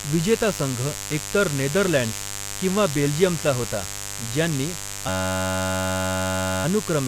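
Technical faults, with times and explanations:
throughout: mains buzz. A raspy buzz sits under the speech at about 10 dB below it, built on 50 Hz. Sharp switching spikes from a dimmer, a rectifier or a missing shield get in twice every mains cycle, stacking up a ladder of 50 Hz harmonics.
5.09 to 6.65 s: system hang loop. The audio locks into one 10.67 ms slice, which fits a 512-sample buffer, repeating 146 times. The driver froze while the hardware kept replaying its ring buffer, so you hear a steady 93.8 Hz buzz at the loop rate.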